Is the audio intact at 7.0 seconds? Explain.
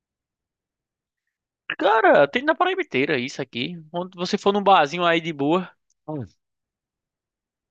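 Yes, at 7.0 seconds the speech plays through cleanly, with no dropout, click, distortion or other fault to be heard at that point.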